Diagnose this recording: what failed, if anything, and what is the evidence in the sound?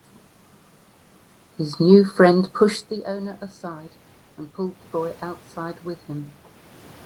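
Automatic gain rising, from 4.56 s to 6.42 s, in the call-processing stage. The voice first falls at the microphone around 3 s when the talker moves, dropping the input level by about 17 dB. The automatic gain control then reads the signal as too quiet and pushes its gain up by about 4 dB over nearly two seconds. Because it scales everything together, the voice and the room noise swell in step.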